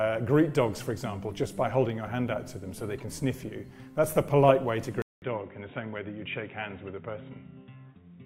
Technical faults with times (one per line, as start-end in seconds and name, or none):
5.02-8.26 input switched to a poorer device